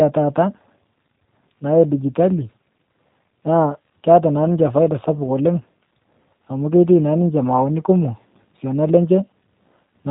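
From start to finish the speech sounds slightly rough and synthetic, with nothing above about 3.8 kHz. This is G.729 codec damage, plainly audible, and it fits an 8 kbit/s stream. The speech is rebuilt from a vocal tract filter, pitch prediction and sparse pulses.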